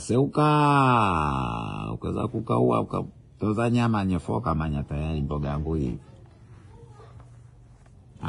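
Speech runs the full clip with a dull, band-limited top, nothing above about 10.5 kHz, and two kinds of compression grit stacked on each other, the artefacts of one codec heard together with those of another. The likely cause is transcoding between lossy codecs. A low-bitrate Vorbis-style first pass was re-encoded by an older WMA-style coder, which spent its bits on the earlier damage and added its own.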